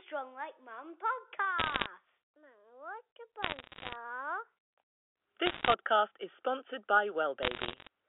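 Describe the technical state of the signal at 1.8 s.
At 1.8 s you're in a burst of bit errors on a digital phone line, 1.59 to 1.86 s. Flipped bits corrupt single samples, so sharp ticks crackle over the speech.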